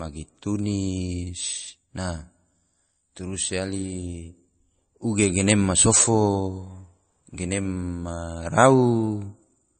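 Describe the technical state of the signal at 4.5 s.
At 4.5 s, as throughout, the speech carries likely MP3 compression: nothing above 8.3 kHz, plus watery, swirling sibilants, unlike a plain low-pass, which fits roughly 32 kbps.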